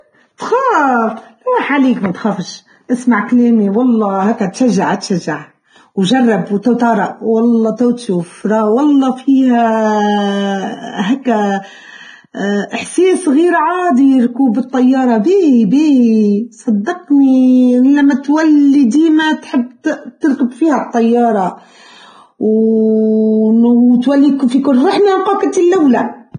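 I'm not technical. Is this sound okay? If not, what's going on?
No. The speech sounds hissy and grainy from start to finish. Sharp sounds lose their crispness. Everything above 9.7 kHz is missing, so the top end sounds dull. This is likely heavy Vorbis compression, squeezing the file too small and discarding fine detail.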